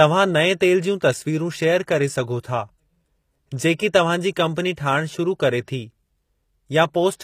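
Throughout the speech, the treble sounds synthetic. Sibilants turn gritty and metallic, and nothing reaches above 15.5 kHz. This is likely HE-AAC compression: upper bands rebuilt from copied lower ones, which fits a low bitrate near 24 kbps.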